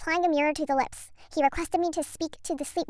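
From start to finish the speech runs fast and high, the mark of a wrong sample rate: the samples play back without conversion at 1.38 times the speed they were captured at, which fits audio recorded at 16 kHz being played at 22 kHz. Pitch rises by about 5.5 semitones while the timing shrinks by the same ratio. A deliberate pitch shift would keep the original pace, and a time-stretch would keep the original pitch.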